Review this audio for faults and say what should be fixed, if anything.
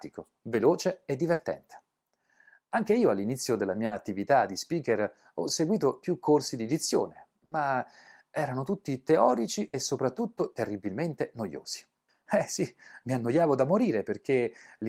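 Brief held buzzes or fading hisses at 1.33–1.42 s, 3.85–3.94 s, 7.45–7.54 s and 9.67–9.76 s are bursts of packet loss. Each time, the receiver stretched the last sound for 60 ms, then skipped 60 ms of speech. Adding forward error correction or a deeper jitter buffer, and improving the network path, would prevent these gaps.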